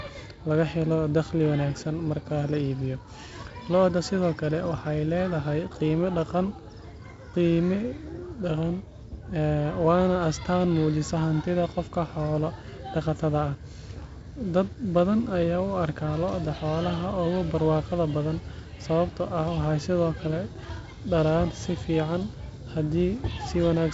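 No faults are audible anywhere in this speech.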